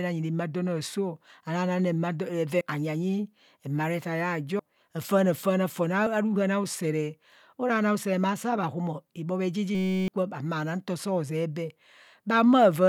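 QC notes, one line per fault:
2.61, 4.59, 6.06 s: compressed frames skipped. The speech jumps forward by about 70 ms, then about 200 ms just before "afaana faana fon", then about 30 ms right after "afaana faana fon", which fits 32 ms frames.
9.75–10.08 s: system hang loop. Between "maa saa bhahumo ibhobhe" and "ma na nto zee", a 5.33 ms slice repeats 62 times, a steady 188 Hz buzz that fits a 256-sample buffer. About a third of a second of speech is replaced, unlike the brief skips.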